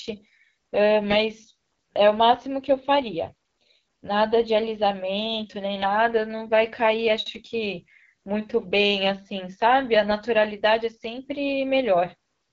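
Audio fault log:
Throughout, AMR wideband (HD Voice) codec: speech sounds rough and raspy with nothing above 7.5 kHz, which fits a low bitrate near 8.85 kbit/s.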